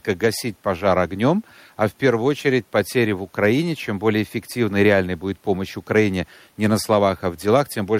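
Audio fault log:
Nothing to log here: listening through this bit of speech, no fault turns up anywhere.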